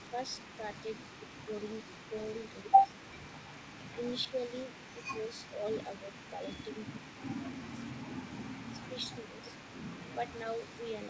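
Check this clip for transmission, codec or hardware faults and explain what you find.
Two faults are audible: a faint echo throughout, and repeated dips in the speech level. The G.722 call path, with nothing above 8 kHz, is not itself at fault.

The echo leak runs through the whole clip. A faint copy of the speech trails it by about 0.38 s, around 20 dB down, likely left behind by an echo canceller that failed to remove loudspeaker pickup. On a spectrogram, each syllable has a weak ghost shifted later in time.

Speech suppressed in double talk occurs at 0.1–0.63, 1.29–1.35, 2.81–2.92, 3.96–6.41, 7.73–7.81, 8.74–9.49 and 10.15–10.33 s. The speech is momentarily pushed down a few dB, and by up to roughly 10 dB near 2.8 and 9 s, likely as the canceller ducks the talker while the other side speaks. The waveform envelope shows brief notches.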